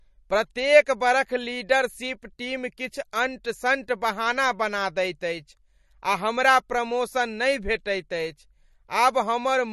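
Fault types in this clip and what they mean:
MP3 compression: throughout the speech there is plainly audible codec damage, likely from MP3 encoding at a low bitrate, something near 40 kbps. Starved of bits, the encoder discards all content above 12.6 kHz, leaving a hard ceiling on the treble, and drops quieter frequency components that then flicker in and out between frames. That frame-to-frame switching gives the voice a watery, swirling texture layered over the dulled top end.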